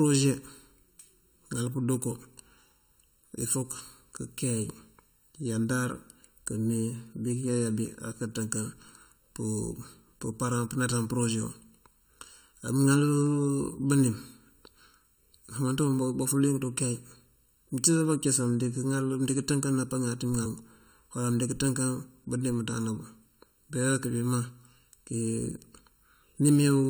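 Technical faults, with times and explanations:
throughout: channel delay (comb filtering). One channel arrives less than a millisecond behind the other, and when the two are summed to mono, whatever they share cancels at regularly spaced frequencies. The first notch sits near 700 Hz, with further notches repeating higher up, so the speech sounds hollow and phasey. Unlike a sweeping phaser effect, the notches never move, and unlike a plain low-pass, the treble is present but scooped in places.
20.45 s: compressed frames skipped. Roughly a tenth of a second of speech is missing because several frames of the compressed stream were never played. The jump fits a multiple of a frame length of about 23 ms, or about four frames. There is no silent gap as there would be in a dropout.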